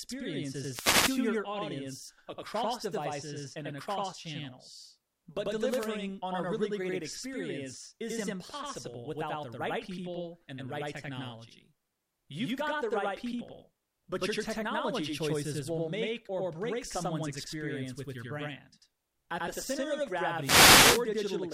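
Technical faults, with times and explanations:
Throughout: channel delay (doubling). One channel arrives about 92.9 ms behind the other, which fits a 4096-sample buffer. Summed to mono, the late copy sits at equal level and is heard as a distinct slap echo trailing every syllable of the speech.
0.64–1.19 s, 5.66–5.82 s, 20.39–20.96 s: wireless microphone noise hit. Each is a brief swish of static as the FM radio link fades through reflection cancellation, letting receiver noise rise. The middle hit is shortest.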